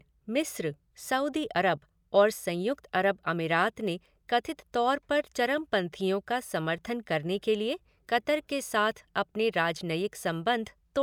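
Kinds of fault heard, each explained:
No technical fault can be heard anywhere in the speech. There is nothing to list for it.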